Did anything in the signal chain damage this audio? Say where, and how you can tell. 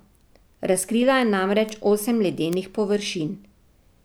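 Yes. Three bit error spikes in the speech, at 0.81 s, 1.69 s and 2.53 s, point to the digital path, either storage or a serial link. Each is a single isolated tick, peaking at about -21, -15 and -9 dBFS. A flipped bit throws one or two samples off by a power of two before the value snaps back. Unlike a buffer dropout or an analogue crackle, there is no gap, no decay, and no link to the speech level.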